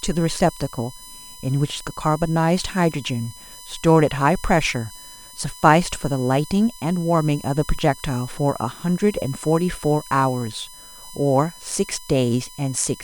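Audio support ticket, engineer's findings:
Steady fixed-pitch whine under the speech, throughout, strongest at 9 kHz, roughly 20 dB down. USB whine: 1 kHz bus frame current leaking through power/ground, with harmonics.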